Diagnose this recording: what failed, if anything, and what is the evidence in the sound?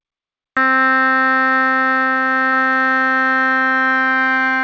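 The failure is a cut-off start, at the capture or recording stage. From 0.0 to 0.57 s there is pure digital silence. At 0.57 s the music enters abruptly, already in mid-sound. There is no attack and no fade-in. The recording began late, after the music had started, so the opening of that sound was never captured. The band stops at 8 kHz, which fits the G.722 call codec this audio passed through.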